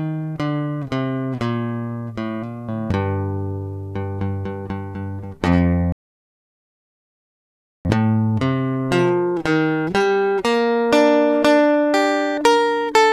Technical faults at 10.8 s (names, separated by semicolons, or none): none